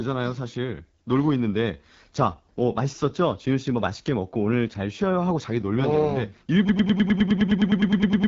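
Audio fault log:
Throughout: AMR wideband (HD Voice) codec, and the damage is plainly audible. The speech has that rough, raspy edge you get from AMR-WB at one of its lowest rates, which fits roughly 8.85 kbit/s. Nothing reaches past about 7.5 kHz, and the top band is synthesised noise, not real detail.
6.69 to 8.28 s: broken-record loop. A 103 ms chunk repeats back to back right to the end, around fifteen times, so everything after that point is gone. Most likely the player or stream stalled and kept resending its last fragment.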